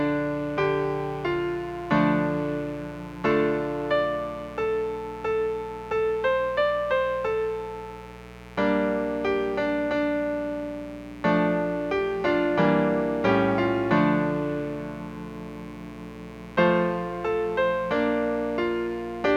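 A steady, raspy mains buzz runs under the audio from start to finish. It sits roughly 20 dB below the wanted signal. The buzz is built on 60 Hz, with a dense stack of harmonics reaching well into the kilohertz range. That harsh edge comes from sharp switching spikes repeating twice per mains cycle. A dimmer, a rectifier or a missing cable shield is letting them into the signal path.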